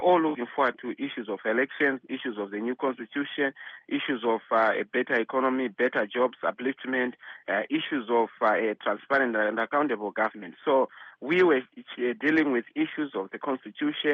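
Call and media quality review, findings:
Nothing stood out on listening; the call path sounds as expected, with its audio band ending around 8 kHz.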